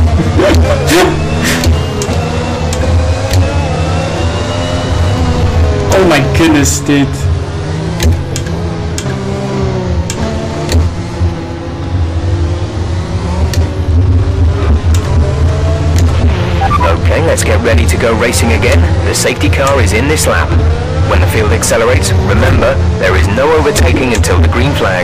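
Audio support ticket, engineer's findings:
Hard clipping throughout, harsh fuzz on every loud bit. Something in the chain overdriven by about 22 dB, so peaks flatten; roughly one sample in seven sits at the rail.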